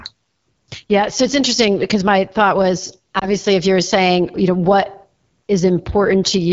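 A short speech recording carried throughout by the AMR wideband (HD Voice) codec, with plainly audible codec damage. The voice is rough and raspy rather than muffled, which points to one of the lowest AMR-WB modes, consistent with about 8.85 kbit/s. At that rate the pulse-driven vocal tract model below 6.4 kHz has too few bits to shape the excitation cleanly, and the band above it is filled with synthetic noise. That grainy, buzzy texture tells it apart from narrowband telephone coding, which sounds dull and band-limited instead. Between 3.19 and 3.28 s there is a lost AMR speech frame: a brief dip that fits a single missing 20 ms frame. The decoder bridged the gap by reusing the previous pitch and vocal tract settings at reduced gain, then recovered slightly rough. Unlike a packet-loss dropout or a digital click, the sound smears and sags rather than cutting to silence or snapping.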